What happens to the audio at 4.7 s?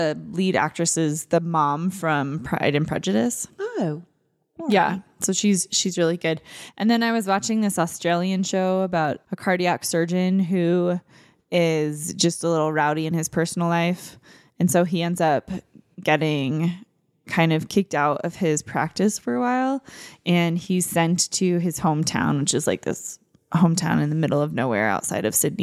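At 4.72 s a sharp snap cuts across the speech, a click only a couple of milliseconds long that sits on top of the sound rather than interrupting it, peaking somewhere around -15 dBFS. This is an electrical switching spike: the likely cause is a nearby switch, relay or static discharge arcing briefly, with the audio line picking up that burst of interference as a near-instant transient before the signal carries on unchanged.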